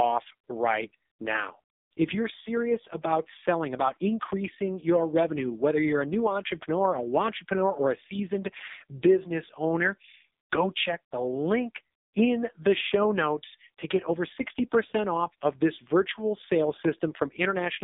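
A speech recording that's been squeezed through the AMR narrowband mobile codec for its whole length. Nothing gets through above about 3.7 kHz or below about 200 Hz, so it has that boxed-in phone-call sound. The damage is heavy: the voice comes out buzzy and synthetic because AMR-NB rebuilds it from a vocal-tract model fed by only a few pulses per subframe, and that degree of roughness fits the codec's lowest mode, around 4.75 kbps.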